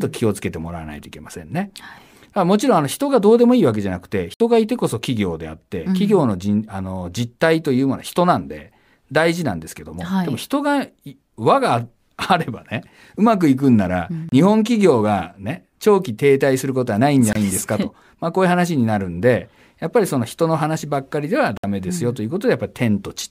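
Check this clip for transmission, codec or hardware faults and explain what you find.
One fault recurs, four short dropouts in the speech. Bluetooth stall, at 4.34 s (62 ms), 14.29 s (31 ms), 17.33 s (25 ms) and 21.57 s (62 ms): the audio cuts to silence, then resumes. The likely cause is interference delaying packets until the headphones' buffer emptied, pausing playback until retransmissions arrived.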